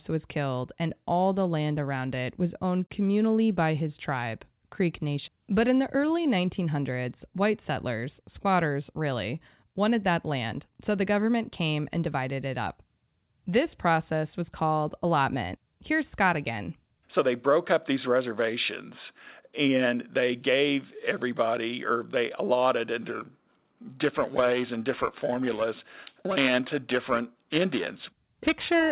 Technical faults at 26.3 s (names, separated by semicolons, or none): periodic clock jitter